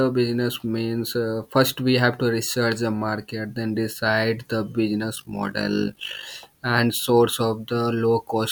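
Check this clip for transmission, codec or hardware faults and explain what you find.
One fault is audible: overlap-add ripple from 5.16 s to 6.25 s in the speech, starting after "market then decide the" and clearing by "and source". The signal was split into windowed frames and rebuilt with an overlap whose window gains do not sum to a constant, so the level swings by about 11 dB once per frame. At a frame rate of around 50 Hz, this is heard as a rough flutter across that stretch.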